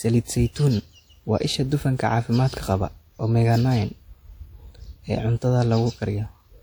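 Throughout the speech, the audio was most likely squeezed through a low-bitrate codec first and then re-encoded as high-bitrate MP3, a case of low-bitrate audio saved at a high bitrate. The generous second encoding keeps whatever reaches it but cannot rebuild detail the earlier pass discarded, so the artefacts of that first compression carry through from start to finish. The spectrum stops at about 20.1 kHz.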